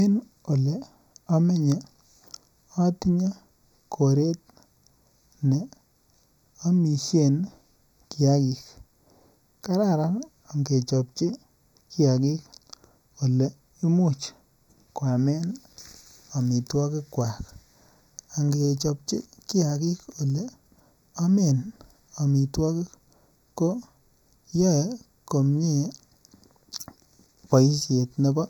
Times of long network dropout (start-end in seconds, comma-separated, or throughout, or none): none